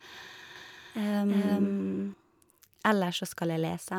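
A speech clip in which the same audio was likely captured a second time through a slower path, or held twice out of step by an edit, producing a doubled audio track from 0.56 to 2.14 s. A full-band copy at roughly equal level trails the original by around 0.4 s, with no decay or room colour, and cuts in and out abruptly.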